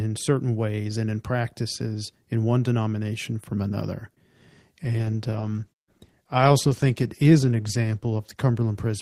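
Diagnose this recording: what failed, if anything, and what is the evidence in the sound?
Call bitrate drop, at the codec: from 4.83 s the speech turns rough and dull as the encoder falls from 32 to 14 kbps, coding coarser and shedding highs.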